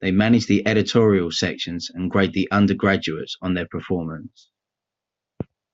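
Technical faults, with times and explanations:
No technical faults are audible in this speech.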